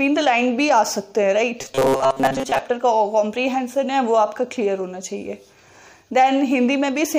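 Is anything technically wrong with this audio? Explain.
Yes. Robotic sound from repeated short buffers runs from 1.61 to 2.59 s. New audio likely arrived too slowly, so playback kept looping a fragment of about 7.5 ms while most of the real signal was skipped, forcing a rigid, metallic 134 Hz buzz onto the sound.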